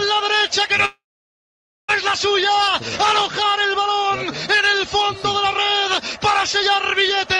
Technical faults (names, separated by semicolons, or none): call audio freeze